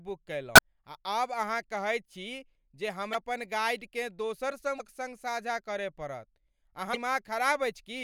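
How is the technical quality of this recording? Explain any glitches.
The speech is marred by four brief bursts of damaged data in a compressed stream, at 0.54–0.59 s, 3.11–3.15 s, 4.77–4.81 s and 6.93–6.97 s, the first about 46 ms and the others about 40 ms each. Corrupted bytes make the decoder misread frames and lose sync until it finds the next valid header. Each burst is heard as a brief chirp, squawk, click or short gap.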